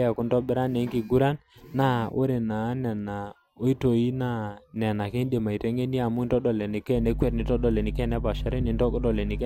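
Speech recording with mains hum kicking in at 6.93 s and running to the end, a steady 50 Hz drone nearly as loud as the speech, from a ground loop or nearby transformer.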